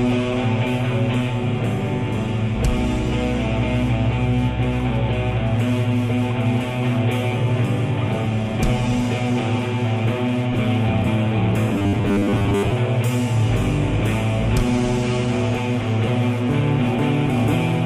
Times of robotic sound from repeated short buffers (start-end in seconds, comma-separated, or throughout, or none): 11.69-12.72